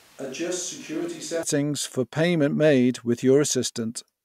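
Speech, with a switch to a distant microphone from the start until 1.43 s, before "for payments made with": hollow, roomy and thin, about 10 dB quieter with more room noise, likely from a failed close microphone.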